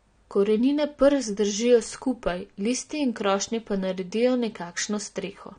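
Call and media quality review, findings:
AAC compression across the whole speech clip. Dull top end, nothing above about 9.6 kHz, with a warbly, fizzy smear on sustained vowels and sibilants. Codec damage plainly audible.

Likely an AAC-LC encode at low rate, sounds like around 32 kbps. The encoder drops the cut-off and starves quantised bands, leaving spectral holes or noise fill. Worth checking the encode settings on this path.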